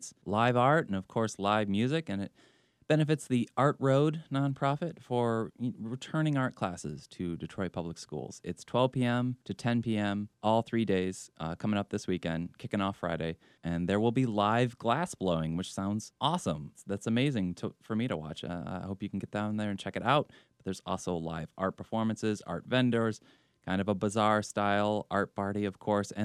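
No technical faults occur at any point in the recording.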